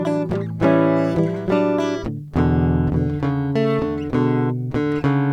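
Listening to this music clip, nothing technically wrong stood out.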